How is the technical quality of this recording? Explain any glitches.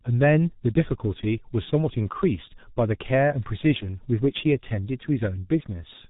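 Poor. The speech is squeezed through the G.723.1 codec for its whole length. Its 30 ms frames and slowly updated voice model, which fits a low rate around 6 kbit/s, leave the sound muffled and hoarse, with smeared consonants. Nothing passes above 3.8 kHz. A simple low-pass filter would dull the top without adding that rasp and blurring.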